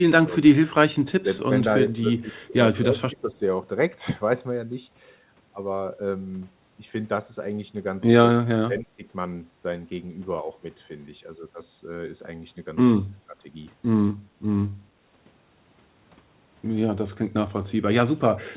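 Speech suppressed in double talk: the echo canceller likely mistook overlapping talk for echo and turned the talker down, at 0.27 s, 1.19 s, 2.83 s, 8.4 s and 13.12 s. The dips grow from slight near the start to almost complete muting around 8.4 to 9.04 s. The whole clip passes through a narrowband G.711 call path with nothing above 4 kHz.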